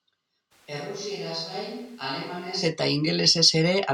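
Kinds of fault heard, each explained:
Switch to a distant microphone: from 0.53 s to 2.61 s the speech abruptly turns roomy and hollow, thinner in the low end and roughly 10 dB quieter, with background room noise rising to sit only about 25 dB under the speech. At 2.61 s it snaps back just as suddenly. The likely cause is that the close microphone dropped out and a farther pickup, such as a camera mic, carried the recording for those two seconds.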